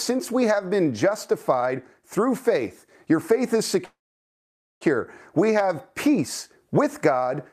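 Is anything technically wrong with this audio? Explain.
Yes. At 3.85 s, right after "faith your faith is", the speech stops and a brief buzzing or hissing continuation of the last sound dies away into near silence, about 870 ms of it, before the talker resumes at 4.83 s exactly where they left off. That is a call audio freeze, likely caused by packets stalling in transit so the jitter buffer ran dry. The receiver padded roughly 0.96 s, so nothing is lost, but everything after runs that much late.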